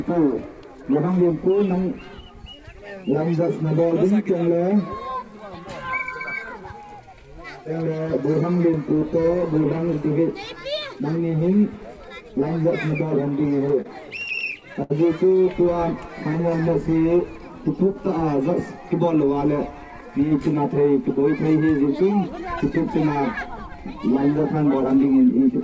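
From 13.40 to 14.92 s the audio shows repeated stalls (stutter). Packets arrived late, the jitter buffer kept running dry, and the receiver bridged twelve short gaps by continuing the last sound, about 197 ms in all, with the longest gap 72 ms. Nothing is lost, but 13% of that span is filled-in sound. What sets it apart from a slow-down is that the flow halts in distinct catches and hiccups rather than stretching smoothly.

From 16.29 to 16.91 s there is a jitter buffer slow-down. With its reserve low, the receiver rebuilt it by repeating single pitch periods and bits of pauses, adding 55 ms and playing at 92% speed. The pitch stays put while sounds are drawn out. Unlike the stutter, there are no audible breaks, only an even drag.

Jitter buffer speed-up follows twice: 19.00 to 20.11 s at 107% speed, losing about a tenth of a second, and 24.39 to 24.99 s at 109%, losing around 70 ms. The buffer held more than its target, so the receiver trimmed pitch-period-sized pieces to shed delay. 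The audio sounds hurried at unchanged pitch, the mirror image of the slow-down. Throughout, the call path cuts off everything above 8 kHz, which fits G.722 at 64 kbps.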